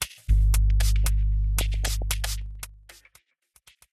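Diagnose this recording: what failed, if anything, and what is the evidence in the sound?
Weak DAB reception let bit errors slip past error correction into the MP2 audio data, producing DAB burbling from 1.58 to 2.02 s. Corrupted samples put short blips of noise into single sub-bands, and corrupted scale factors make sub-bands jump in level for up to a frame. The damage fits roughly nineteen frames and an error rate of around a third of a percent.

In playback, a gain change was applied in 1 dB steps with no smoothing between them, causing zipper noise from 2.37 to 3.16 s. Each step puts a small click into the waveform, and at roughly twenty steps per second these merge into a ticking zip while the level falls by about 25 dB.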